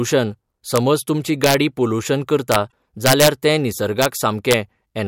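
Integer overflow strikes the speech at 0.76 s, then from 1.44 to 1.54 s and 2.52 to 2.56 s. Loud peaks pass the largest integer value. They wrap to the opposite sign instead of being limited. Each one is a violent crack, harsher than clipping.

Damaged data in the compressed stream follows at 2.68 to 2.72 s. The decoder misreads the bad frames and loses sync. It hunts for the next frame header. A chirp, squawk, click or short hole results.

The overflow returns from 3.06 to 3.28 s, the worst case, about 6 dB past the limit. Further cracks land at 4.02 to 4.06 s and 4.51 to 4.54 s. The overshoot across all six ranges from about 0 to 6 dB.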